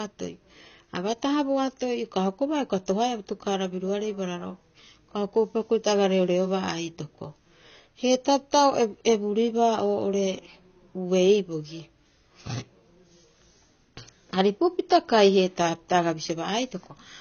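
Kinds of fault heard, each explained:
AAC compression: The speech was likely passed through an AAC-LC encoder at a low data rate, one that fits about 24 kbps. To save data, the coder discarded detail its hearing model judged least audible and narrowed its bandwidth. Nothing remains above 6.6 kHz for the whole clip, which dulls consonants and sibilants. The coarse quantisation also leaves plainly audible codec damage throughout: a smeared, processed texture over the speech.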